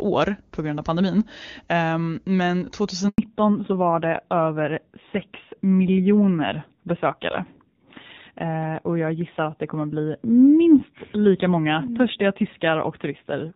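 A speech recording carried over a mobile call, with two linked faults at the same moment. First comes a handover gap from 3.08 to 3.18 s. The phone switched the call between networks, and no speech frames arrived for about 100 ms. The voice dies away within a few tens of milliseconds and stays silent until the new link delivers sound again, so anything said in that window is lost. Before the gap the call runs on the AMR wideband (HD Voice) codec, with faint or no coding damage and a clean upper band consistent with its highest mode, around 23.85 kbit/s. From 3.18 s to the end, a fallback to narrowband takes over. The new link uses the older AMR narrowband codec, and nothing above 4 kHz survives. The speech loses its crispness and sibilant detail and sounds duller and rougher, which fits a low narrowband rate near 7.4 kbit/s.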